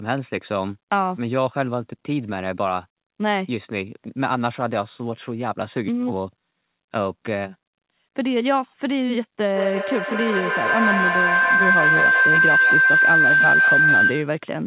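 A speech recording carries a feedback howl from 9.54 to 14.48 s, building to about 6 dB above the speech near 1.5 kHz, with the loop repeating roughly every 150 ms. On a spectrogram it is a brightening horizontal line, and on the waveform a swelling envelope. Nothing is present above 4 kHz, which points to a narrowband G.711-style call codec.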